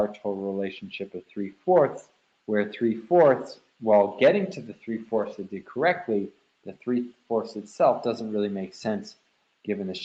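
At 2.05 to 2.36 s, 6.31 to 6.85 s and 7.13 to 7.3 s, the sound is cut by the noise suppressor. It mistakes parts of the sound for noise and pulls them down. The drop reaches about 12 dB at its deepest in each event. Only part of each span is affected, from well under a quarter second to a few tenths. Steady or fading parts sink or end early. Sudden onsets mostly get through. The call microphone processing leaves nothing above 8 kHz.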